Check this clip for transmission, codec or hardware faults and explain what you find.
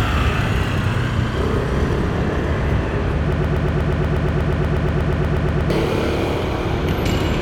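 There is one fault: a broken-record loop. From 3.33 s to 5.70 s, a fragment about 120 ms long repeats back to back, roughly 20 times. Each pass is identical, so the sound stutters in a rigid, mechanical rhythm at about eight repeats per second. The likely cause is a stalled player, encoder or stream that kept resending the last fragment it held. Whatever should have played in those 2.4 seconds is gone.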